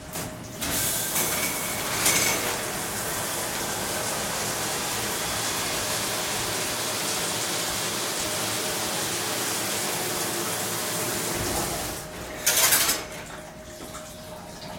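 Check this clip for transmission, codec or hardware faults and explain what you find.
No transmission, codec or hardware faults turn up anywhere in this recording of sounds. There is nothing to report.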